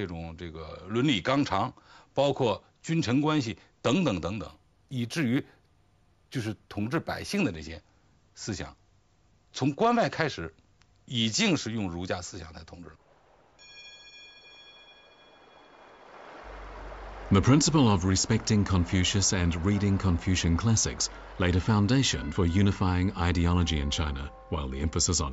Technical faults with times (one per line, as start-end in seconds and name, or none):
4.47-7.38 imaging from linear upsampling